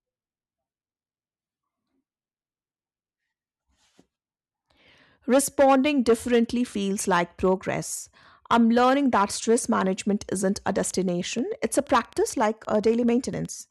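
A train of clicks runs from 10.84 to 13.46 s, after "stress management isn't a": roughly twenty unevenly spaced pops, as loud as the speech, likely from interference.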